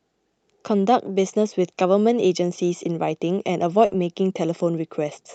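Speech with a burst of packet loss at 3.85–3.94 s. About 60 ms of concealment smears the last sound into a fading band before audio resumes with 60 ms missing. The Opus call path cuts off above 8 kHz.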